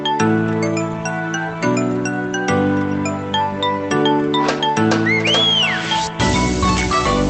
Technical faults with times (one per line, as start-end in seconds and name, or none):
none